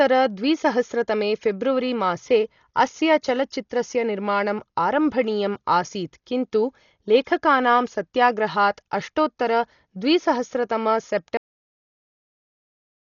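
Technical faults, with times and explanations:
Throughout, Dolby Digital compression: the speech sounds dull, with nothing above about 6.9 kHz and a rough, fluttery noise clinging to the voiced parts. That's likely an AC-3-style encoder starved of bits. The damage is heavy enough to fit a very low rate, something around 40 kbps. At that rate the encoder chops the top of the band and leaves many frequency lines without mantissa bits, so the decoder fills them with dither noise.
11.37 s to 13.08 s, cut-off end: the speech stops dead in the middle of a sound at 11.37 s and drops straight into digital silence with no natural decay, which holds for the last 1.7 s. The final buffers were never written or played out, so the sound doesn't fade or finish. It just vanishes, and nothing follows but empty samples to the end.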